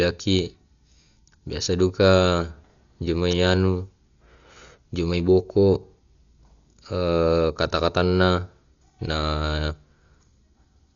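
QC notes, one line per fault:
throughout: Dolby Digital compression is the likely cause. Speech sounds dull with nothing above 6.9 kHz, plus a rough, fluttering noise around tonal parts, because lines left without mantissa bits get filled with dither noise on decode. The damage is heavy, which points to a bitrate around 48 kbps.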